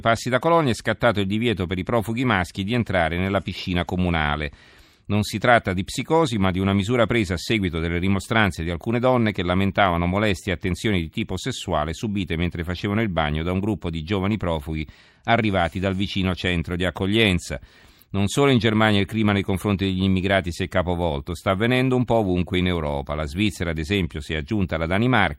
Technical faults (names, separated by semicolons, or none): clock slip clicks